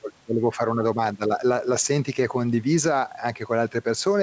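Gain pumping runs throughout this speech recording: the gain swings by about 5 dB under louder sounds, likely from excessive input gain driving a fast limiter.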